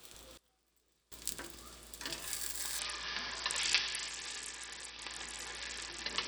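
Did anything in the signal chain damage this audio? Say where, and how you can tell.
Yes, in two places.

A sudden gain jump runs from 0.37 s to 1.12 s. The level drops by about 24 dB in a single step, with no fade, and the background noise falls by the same amount at the same instant. It then returns just as abruptly. Because signal and noise floor move together, the change happened on digital samples and not acoustically. The likely cause is a digital gain setting or bit shift in the driver or buffer stage applied without a ramp.

A Bluetooth SBC bit pool drop starts at 2.79 s and lasts to the end of the clip. At that moment the treble dulls and a gritty, granular noise rides on the sound, and neither clears before the audio stops. This is the codec stage on a congested wireless link. The encoder cut its bit allocation, which fits a bit pool falling from 31 to 7, roughly 61 kbps. That starves the upper sub-bands and coarsely quantises the remaining ones.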